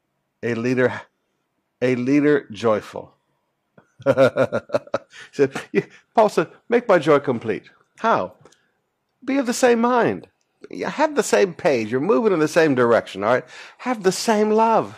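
A speech recording with nothing technically wrong with it.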